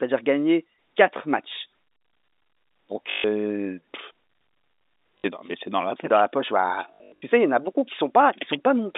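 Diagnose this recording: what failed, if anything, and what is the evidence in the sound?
The network stage failed: packet loss with last packet repeated. At 3.1–3.24 s, 5.18–5.24 s (just before "dans mais c'est dans") and 6.94–7.22 s (between "la poche bah" and "sais il y en", in short runs up to 80 ms) the audio stutters robotically and buzzes near 50 Hz, which fits 20 ms packets replayed while the receiver waited for new ones. The waveform shows identical 20 ms blocks, and the spectrogram shows the repeated blocks across the 250 Hz–3.7 kHz telephone band.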